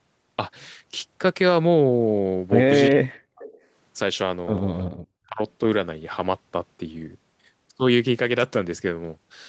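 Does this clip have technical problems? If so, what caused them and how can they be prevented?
Yes. Speech suppressed in double talk appears from 2.89 to 3.44 s, dipping roughly 40 dB, and from 5.25 to 5.4 s, dipping about 25 dB. This is likely an echo canceller ducking the talker while both sides spoke. The waveform pinches almost flat, and the spectrogram goes dark across the band. Better double-talk detection in the canceller, or a headset, prevents this.

Echo leak follows at 3.41 to 3.58 s. It is a faint copy of the sound arriving 328 ms late, about 20 dB below the speech, likely loudspeaker pickup the canceller missed. On the spectrogram it shows as weak, smeared traces of the earlier pattern, and the waveform carries a low ripple. Using headphones or tuning the far end's echo cancellation stops it.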